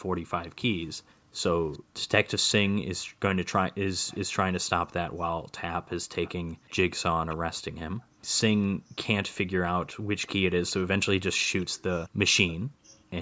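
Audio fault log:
1.05–3.2 s, 8.06–8.95 s and 12.65–13.1 s: background gated by the echo canceller. The canceller clamped the microphone while far-end audio played, pulling the room sound down by up to about 40 dB for a few tenths of a second before releasing it.
1.72–4.19 s and 5.86–12.55 s: echo leak. Far-end audio played on a loudspeaker and picked up by the microphone was likely not fully removed by the echo canceller, so a faint copy roughly 25 dB below the speech trails it by 0.40 s.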